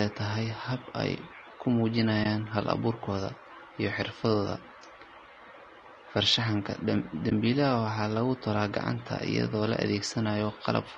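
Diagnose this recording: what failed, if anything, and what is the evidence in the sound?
Codec stage. The speech is rough and grainy throughout, with noise between harmonics. This is likely low-delay AAC compression, consistent with about 32 kbps.

Codec or network stage: AAC frame loss with muting. There are brief dips at 2.23 to 2.26 s, after "tahay hab ay ku", and at 7.29 to 7.32 s. Each fits one lost frame that the decoder zeroed and then faded.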